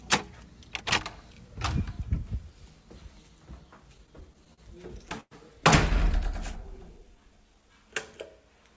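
Repeated stalls (stutter) run from 3.98 to 5.33 s. Packets reached the receiver late, or more slowly than they were played out, so the jitter buffer kept running dry. Eleven times in that span the receiver held the last sound going, fading it during the longer waits, for about 236 ms in all, roughly a sixth of the span. The longest hold lasts 108 ms. Nothing drops out, but the sound drags and catches repeatedly.

A jitter buffer slow-down follows from 6.08 to 7.74 s. With its reserve low, the receiver repeated single pitch periods and fragments of quieter stretches many times over, adding 104 ms. The sound plays at about 94% speed with its pitch unchanged, so it is drawn out. Throughout, the call codec passes nothing above 8 kHz, which fits a wideband codec of the G.722 kind.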